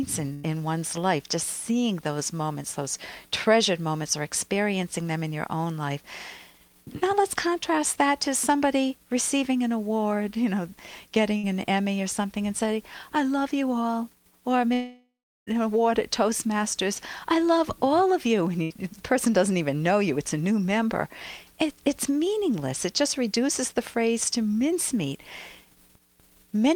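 Burst of packet loss at 0.33 to 0.45 s, 11.37 to 11.45 s and 18.63 to 18.83 s. About 100, 60 and 80 ms of audio never arrived. The receiver stretched the last sound into a short buzz or hiss that fades, and then the audio jumps ahead.

Long network dropout at 14.73 to 15.49 s, likely a lapse in delivery. About 740 ms is missing. The concealment tail fades out, leaving roughly 370 ms of silence before the audio resumes further on.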